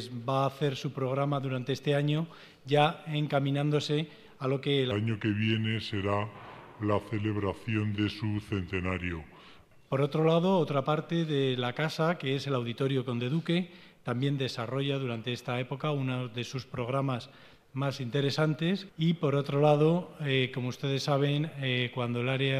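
From 4.91 to 9.87 s, a section at the wrong speed plays at 0.795x, sounding slow and about four semitones deep, likely from a mismatched playback clock.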